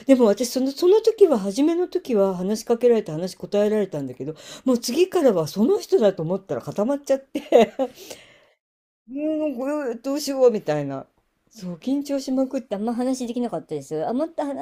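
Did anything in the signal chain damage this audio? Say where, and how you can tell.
Yes. From 12.68 s to the end at 14.62 s, the speech runs at the wrong speed, about 1.15 times too fast, and its pitch rises by roughly two semitones. Tempo and pitch jump together at that moment, which points to resampling against a mismatched clock, likely at the playback or editing stage. A pitch-shifter would change pitch without hurrying the timing, and a time-stretch would hurry the timing without raising pitch.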